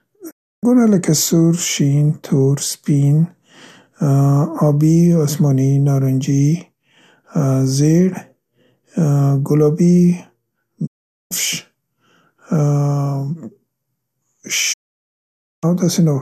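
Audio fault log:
0.29–0.65 s, 10.85–11.33 s, 14.72–15.65 s, digital broadcast dropout: the speech fades out within about 20 ms and drops to silence when the receiver loses good frames, then resumes (first at "لکه سور شین تور"). The gaps grow from 0.35 to 0.93 s, and whatever was sent during them is gone.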